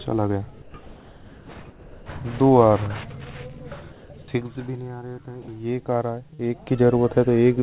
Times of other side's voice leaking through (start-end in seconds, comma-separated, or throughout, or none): none